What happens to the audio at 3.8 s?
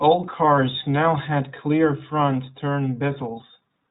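At 3.8 s, as throughout, the iLBC codec cuts everything above 3.9 kHz and codes each frame independently. Unlike a plain low-pass filter, it adds plainly audible rough, synthetic grain, which fits 20 ms frames at 15.2 kbps.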